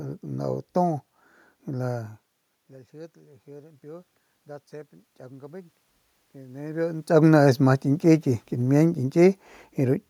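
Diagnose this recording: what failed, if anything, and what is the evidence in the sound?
Automatic gain rising, in call processing: the input fell by about 24 dB, so the gain control raised its gain about 4 dB between 4.83 and 7.15 s. Voice and room noise swell together, and the waveform envelope and the spectrogram's noise floor climb as one slow ramp.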